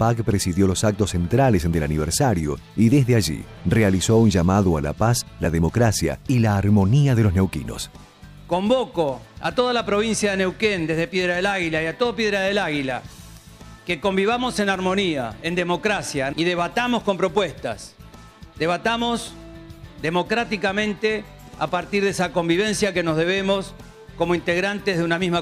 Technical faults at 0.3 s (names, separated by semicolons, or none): none